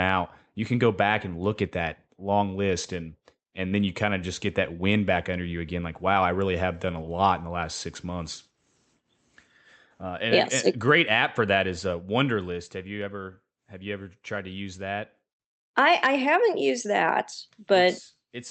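No technical faults are audible.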